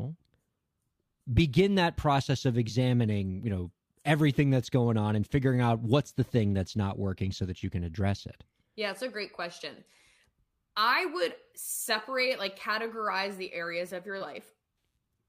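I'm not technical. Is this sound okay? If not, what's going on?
Yes, no faults to hear.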